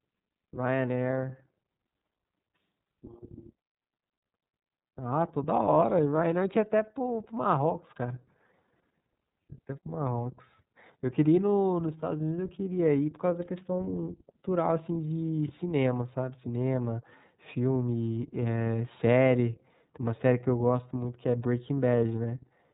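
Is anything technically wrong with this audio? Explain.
Yes. The speech carries iLBC codec damage from start to finish. Nothing above about 3.8 kHz survives, so the voice sounds thin and boxed-in. The codec codes each short frame's excitation on its own, without building on the frame before. That leaves a plainly audible roughness and a slightly synthetic, buzzy edge on the speech. The texture points to 30 ms frames at about 13.33 kbps, the codec's lower-rate mode.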